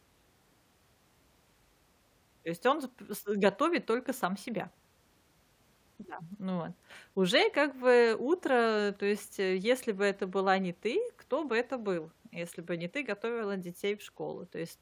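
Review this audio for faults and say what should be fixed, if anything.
Nothing needs to be fixed, as the review finds no faults in this audio.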